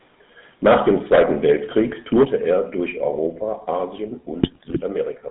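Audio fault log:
Throughout: GSM full-rate codec. The speech has a buzzy, gravelly roughness that is plainly audible. The coder models the vocal tract and drives it with a sparse train of regular pulses, keeping only every third excitation sample. That coarse excitation causes the grit. The band runs from about 150 Hz to 3.7 kHz, so the voice sounds thin and boxed in. The sound fits the 13 kbit/s full-rate coder.
0.67 s, 2.25 s and 3.27 s: microphone volume stepped down. At each point the voice and the background drop together, in a single step. The drops are about 2 dB, about 6 dB and about 3 dB. The middle one comes right after the distorted peak at 2.13 s. The likely cause is call software lowering the input volume after it judged the microphone too hot. That is why the level falls abruptly and never glides.
2.13–2.24 s: microphone overload. The loudest stretch here turns harsh and crackly. 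Its peaks were driven about 8 dB past the converter's limit. Their tops were sliced flat, which probably affected around a fifth of the samples in that span. Flattened waveform tops add a spray of hard harmonics, and those produce the rasping edge. The likely cause is an input volume set too high, which also fits the volume step that follows immediately.
4.43–4.81 s: GSM bit errors. For almost 0.4 s the speech breaks into squawks, pops and gargling. Corrupted bits reached the decoder, and the damage points to a few percent of bits flipped across roughly twenty consecutive frames. When filter values are hit, the spectrum bends strangely. When pitch or gain values are hit, the level jumps or the voicing warbles. The result is a short burst of garbled, unstable sound.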